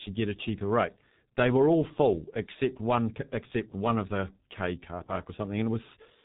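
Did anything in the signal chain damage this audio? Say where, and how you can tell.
Yes, at the codec stage, and it runs the whole clip. This speech has been through G.723.1: nothing above 4 kHz, a muffled, hoarse tone, and smeared consonants from a voice model updated only every 30 ms frame. The heavy damage fits roughly 6 kbit/s.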